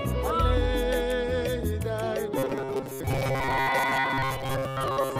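Robotic sound from repeated short buffers runs from 2.38 s to 5.19 s. The likely cause is audio arriving too seldom, so a chunk of about 7.5 ms is replayed in place of most of the real signal. This imposes a rigid, metallic buzz at 134 Hz.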